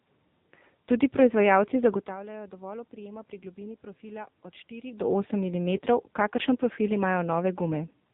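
From start to finish the speech sounds buzzy and synthetic, confined to a muffled telephone band with nothing above 4 kHz, and the room noise behind it churns into a swirling warble. This is the AMR narrowband mobile codec at heavy damage: the voice is rebuilt from a vocal-tract model fed by a few pulses per 5 ms slice, and the coarseness fits a low bitrate of about 6.7 kbps. The level shifts near 2 s and 5 s come from the talker moving, not from this fault.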